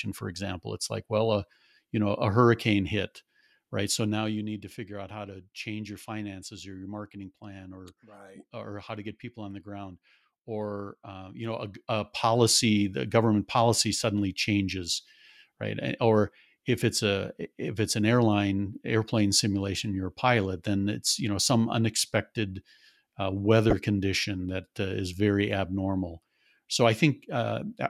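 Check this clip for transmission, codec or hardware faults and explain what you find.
One transmission fault is audible in the speech. A corrupt frame decoded at 23.70–23.73 s, between "know some unexpected uh" and "condition that uh is", gives a short glitch. Damaged bits in a couple of compressed frames misplaced energy, peaking near -10 dBFS. On a spectrogram it appears as a brief, stray vertical smear.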